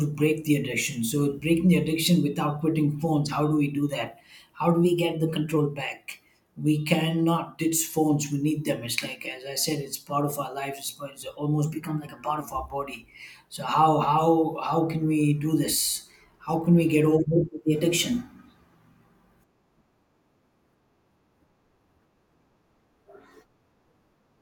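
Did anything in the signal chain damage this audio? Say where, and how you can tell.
Yes. The speech abruptly runs about 6% fast and a semitone sharp, then snaps back, at 4.85–5.56 s, at 11.66–12.40 s just before "of our body", and at 17.36–18.76 s just after "can we get over". This is likely a drift correction step at the buffer stage: clock-matching software jumps the playback rate to rebalance its buffer.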